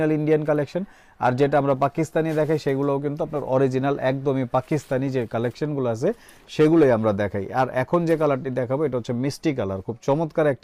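There's one glitch, a short concealed packet loss at about 8.43 to 8.46 s. Around 20 ms of audio didn't arrive in time, so the receiver patched the gap by extending the preceding sound for about 12 ms and fading back in, which leaves a quick smeary wobble there.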